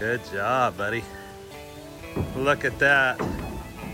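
Grainy, gritty distortion runs through the whole sound, tracking its level, with the quantisation error sitting about 25 dB below the signal. The likely cause is low bit depth without dither: rounding to a coarse grid, which fits around 7 bits.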